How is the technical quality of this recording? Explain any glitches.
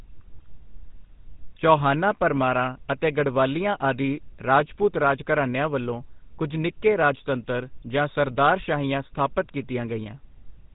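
The quality is noticeably degraded. The speech has been through the GSM full-rate codec for the whole clip. The coder models the vocal tract and drives it with a sparse, regularly spaced pulse excitation, at a rate that fits a 13 kbps GSM full-rate stream. This leaves a plainly audible buzzy, gravelly roughness, with nothing above 3.8 kHz. A simple telephone band-limit would sound smooth and muffled, not rough.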